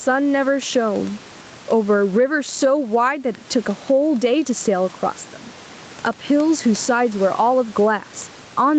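Gain pumping runs through the whole clip. The gain swings by around 10 dB. The likely cause is input gain set far too high, with a fast limiter clamping down and squashing the dynamics.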